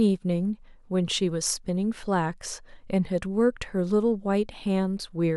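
No technical faults can be heard anywhere in this speech recording; the signal stays intact and steady throughout.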